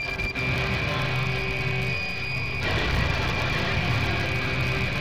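From the start, the filter restarted on every block produces a steady 100 Hz buzz. The filter discards its state at each block boundary and begins from zero, so every block opens with a small transient. One hundred restarts per second points to 10 ms blocks, and the buzz rises and falls with the level of the sound.

At 1.00 s a DC step shifts the waveform's zero line to a new offset, which then holds until the clip ends. It is heard as a single low thump at that moment, while the sound carries on unchanged above the displaced baseline.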